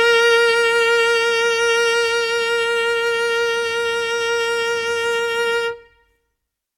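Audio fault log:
No faults are present; the music signal remains technically sound across the whole recording.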